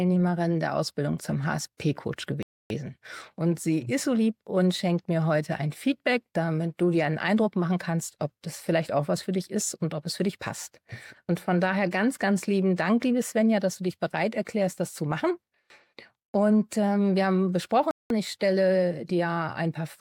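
At 2.43 s the sound cuts to silence for about 0.28 s, returning at 2.70 s, and at 17.91 s a second gap of about 0.19 s follows, ending at 18.10 s. Both are likely a Bluetooth stall: delayed packets let the receiving buffer empty, so playback halts until data arrives again. Unlike a dropout masked by concealment or a codec glitch, these gaps are true, clean silence with no smeared or buzzy fill.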